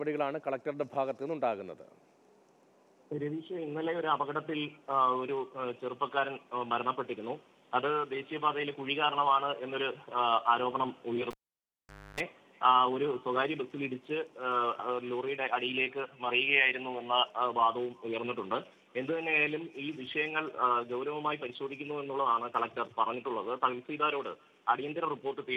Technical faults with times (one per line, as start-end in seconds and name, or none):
11.31-12.20 cable pulled and plugged in